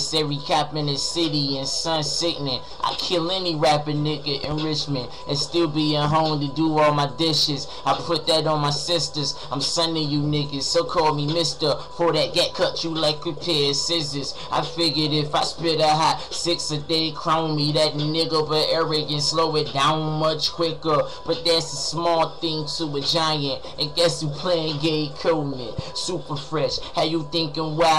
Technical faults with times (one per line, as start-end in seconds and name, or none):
4.44-4.54 loud pop
25.79-25.82 loud pop